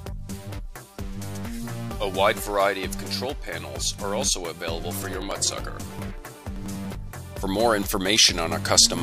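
Periodic USB or driver dropouts run from 5.03 to 6.95 s in this audio: around twenty short losses of about 4 ms each, spaced every 96 ms, where something stalls the audio path and samples are skipped outright, heard as regular ticks while sound plays.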